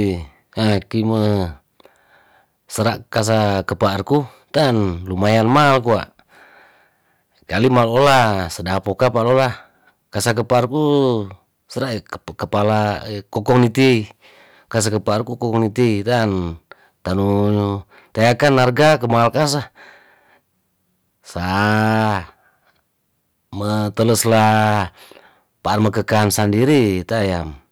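From start to finish, every louder syllable of the speech carries a harsh, buzzy fuzz with a gritty crackle on the strongest peaks. This is hard clipping. The signal was driven about 14 dB beyond what some stage in the chain could pass, so the tops of its peaks were sliced flat. Only a small share of the waveform, around two percent, hits that ceiling, but those squared-off edges add harmonics high in the spectrum, producing the distortion.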